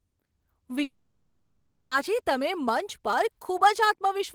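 A likely long network dropout halts audio at 0.83 s; the last sound fades as a buzz or hiss, then silence, until 1.94 s, the gap lost.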